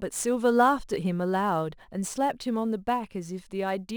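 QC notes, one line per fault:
Throughout, sample clock jitter: the converter's timing wobbles by a few microseconds, adding a grainy hiss that tracks loud, bright speech, roughly 30 dB down, gone in pauses.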